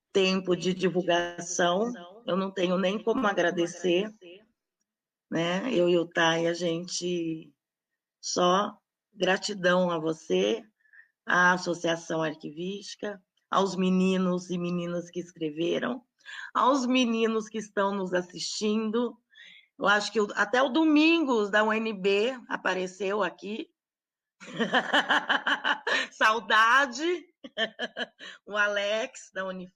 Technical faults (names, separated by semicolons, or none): short stall from a late packet; call audio freeze; jitter buffer speed-up